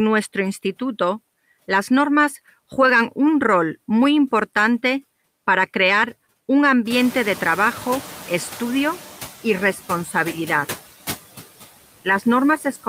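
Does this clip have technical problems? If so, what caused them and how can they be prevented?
Yes. Noise suppressor artifacts run through the whole speech clip: background noise is pulled down by about 13 dB, visible on a spectrogram as speckled, patchy gaps between words. A gentler suppression setting or a quieter recording space would prevent this.

Noise suppressor catching up occurs from 6.90 to 9.09 s, after "importante para crear un" and before "y responsabilidad". The room noise jumps about 18 dB near 7 s, and the suppressor's estimate lags, cutting only about 7 dB for 2.19 s. A spectrogram shows a bright noise band that fades gradually. A suppressor with faster noise tracking would prevent this.

Speech cut by the noise suppressor occurs from 12.58 to 12.86 s. About a tenth of a second of speech dips by up to about 11 dB, so the waveform's envelope caves in and the clip's ending sounds swallowed. 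Less aggressive suppression, or protecting speech-dominated bands, would prevent this.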